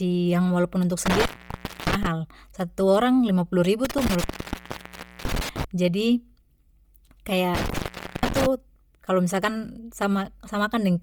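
A speech recording carries heavy transform-codec damage across its whole length. The top of the spectrum turns breathy and granular where spectral content has been discarded and replaced with shaped noise, though energy still reaches about 20.2 kHz. This most likely comes from Bluetooth LC3 compression, with a frame-by-frame texture consistent with 10 ms frames and a coarseness that fits a low bitrate around 32 kbps. Intermittent contact also breaks the signal three times, each with crackle at the edges as a loose connection opens and recloses. Between 1.06 and 2.07 s the line drops out for about 0.61 s. Between 3.85 and 5.64 s it is open for about 1.01 s. Between 7.55 and 8.46 s it is open for about 0.45 s, ending just before "kalo misalkan". During each open stretch faint residual hiss remains.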